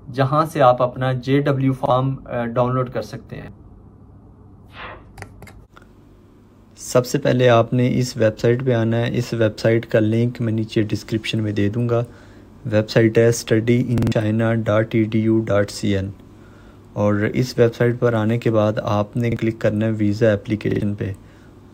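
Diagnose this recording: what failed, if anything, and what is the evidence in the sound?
Driver or buffer stage: repeated buffer stutters at 1.86, 3.44, 13.98–14.12, 19.32 and 20.71–20.81 s. Late data forced replay of a 46 ms block, fitting a 2048-sample buffer.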